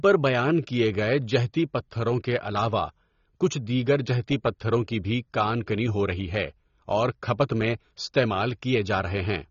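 From start to finish the speech sounds dull and muffled, with nothing above about 6.9 kHz, and sibilants and held vowels carry a fizzy, warbling smear that is plainly audible. This is AAC compression, likely AAC-LC run at a low bitrate, which fits something around 24 kbps. Short of bits, the encoder cuts off the top of the spectrum and quantises what remains coarsely, leaving gaps and swirling texture in the higher bands.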